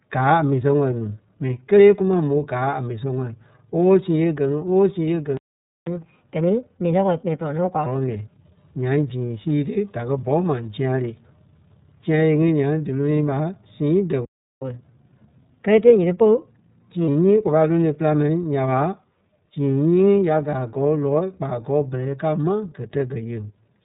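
The whole clip goes through an iLBC codec: band-limited speech, nothing above about 3.8 kHz, with a plainly rough, synthetic edge that fits its 30 ms frame mode. At 5.37 s a playback stall cuts the sound dead for about half a second, likely a starved buffer or blocked player thread. From 5.87 to 7.86 s catch-up at higher speed kicks in, with the backlog played at 1.25x so everything runs quick and roughly four semitones sharp. A second stall hits at 14.25 s and lasts 0.37 s, followed by a milder catch-up from 14.62 to 17.08 s at 1.15x, about two semitones high.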